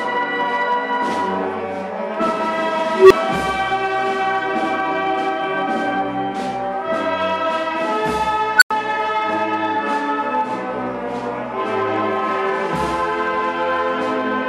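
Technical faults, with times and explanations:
2.95–3.11 s and 8.58–8.71 s, unstable filter: a recursive filter runs away, a tone near 400 Hz swelling over 157 ms, then one around 1.5 kHz over 40 ms, each growing into a loud clipped squeal before overflow cuts the output, leaving silences of 5 ms and 90 ms until reset.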